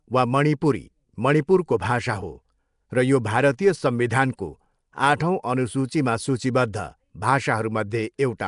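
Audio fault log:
Throughout: likely Nellymoser compression, the old Flash microphone codec. The speech carries a rough, hissy halo and sounds smeared, as if underwater. Nothing is heard above 10.6 kHz. Weak bands get no bits and are filled with noise, which makes the hiss.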